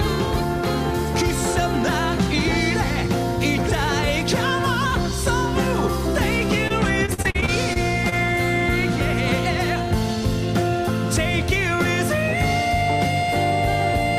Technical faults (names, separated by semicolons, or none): repeated packet loss (robotic sound)